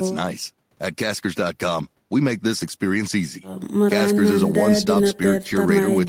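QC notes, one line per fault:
No faults found.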